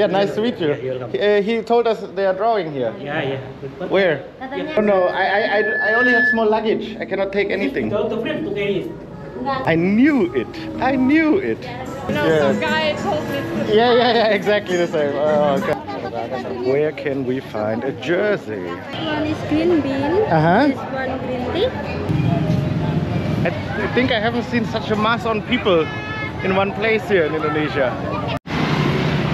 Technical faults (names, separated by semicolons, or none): loudspeaker feedback squeal